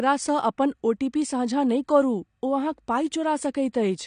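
Speech, dulled throughout with nothing above 9.7 kHz and a warbling smear on sibilants, likely AAC compression near 32 kbps; a low-pass wouldn't warble.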